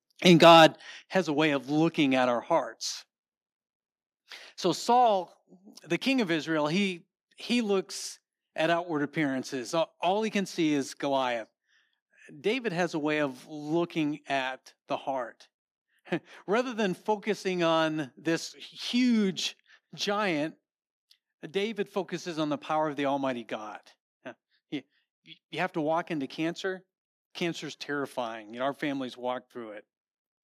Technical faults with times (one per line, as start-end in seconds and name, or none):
0.26-0.66 microphone overload
1.02 microphone volume stepped down
5.07 microphone volume stepped down